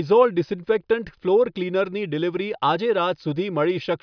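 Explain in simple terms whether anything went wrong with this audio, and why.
Nothing went wrong; no problems can be heard here.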